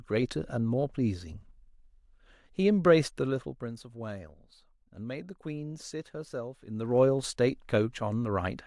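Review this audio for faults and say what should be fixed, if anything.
There's zipper noise in two spots. From 3.03 to 3.73 s the level drops by about 10 dB, and from 6.66 to 7.02 s it climbs back by about 10 dB in 1 dB steps. Both times the gain moves in small jumps around 50 times a second with no smoothing between them, so each jump leaves a tiny click and you hear a fast ticking riding on the speech. To prevent it, ramp the gain per sample, or smooth it over each block instead of stepping it.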